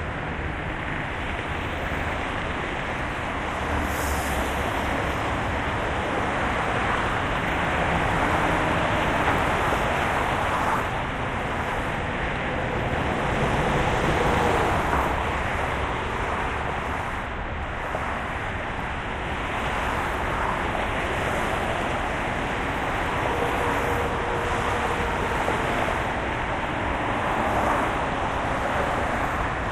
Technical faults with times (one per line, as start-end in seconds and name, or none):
0.94-1.02 repeated frames
25.11-25.16 repeated frames